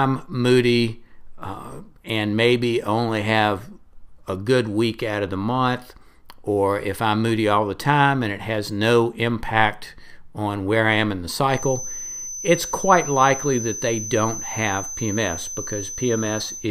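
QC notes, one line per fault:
11.47–16.71 s, feedback whistle: just after "I am in the", a thin, steady tone near 6.1 kHz enters about 10 dB below the speech and holds, swelling and fading slowly, to the end. A loudspeaker-to-microphone loop likely sitting right at the edge of feedback sustains it.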